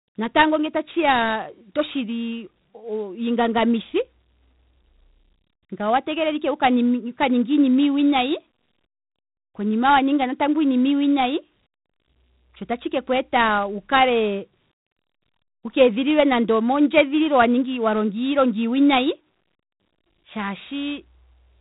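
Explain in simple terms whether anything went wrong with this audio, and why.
The speech carries a fault from start to finish: 4-bit ADPCM compression. This method saves space by storing each sample as a small step from a guess, so errors creep in wherever the sound changes quickly. Here the damage is heavy. Every louder syllable comes with a gritty hiss, and sharp sounds get roughened. Nothing is heard above about 3.8 kHz, which points to a low recording rate and gives the speech a dull, telephone-like tone.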